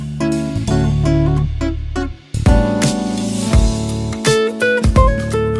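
No technical faults can be heard anywhere in this recording.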